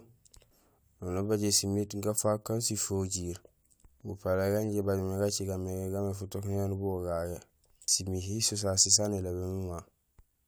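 Nothing technically wrong can be heard in this speech recording: the signal stays continuous and steady in level, with no faults anywhere along its length.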